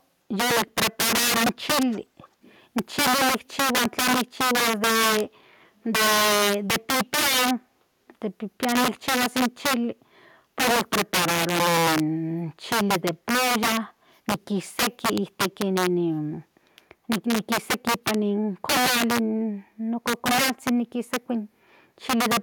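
Integer overflow runs through the whole clip. The signal was pushed about 14 dB past full scale, so a few percent of samples exceeded the integer limit. Instead of being held at the ceiling, each of those peaks wrapped around to the opposite extreme. On every loud stretch of speech this produces harsh, violent cracks, far sharper and more splintered than ordinary clipping, because the waveform jumps across the entire range rather than flattening.

Echo leak appears in three short scraps, from 0.67 to 0.71 s, 1.91 to 2.00 s and 2.19 to 2.56 s. Each time a faint copy of the speech returns 367 ms after the original, very quiet at first and somewhat stronger in the later two. This is likely a far end playing the call on a loudspeaker whose echo canceller failed to fully remove what its microphone picked up, sending that residue back as a delayed ghost.

Background gated by the echo canceller shows up at 13.95 to 14.03 s. 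The room sound dips by about 7 dB for less than a tenth of a second, then comes straight back. The canceller clamped the microphone down while the loudspeaker was active and released it once it judged the playback had ended. The result is a brief hollow gap in the ambience.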